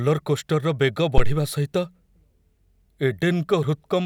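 A speech clip with a phantom power thump from 1.18 to 1.41 s: a deep, low-frequency thud peaking at about -4 dBFS and dying away over roughly 50 ms. A supply switching on or off on the live input sends a voltage step through the coupling capacitors. Unlike a handling bump, the thump is a single smooth decay.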